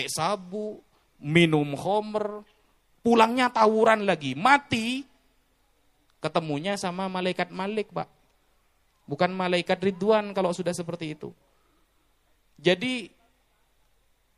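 Throughout, the treble is cut off and weak detail flickers between frames, sounding watery; this is likely MP3 compression, its damage consistent with about 64 kbps.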